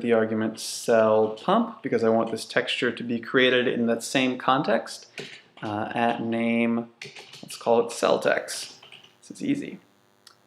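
From 8.38 s to the end at 10.47 s, a DECT cordless phone buzz appears: 100 Hz radio bursts rectified into the audio, a thin harmonic-rich buzz roughly 40 dB below the signal.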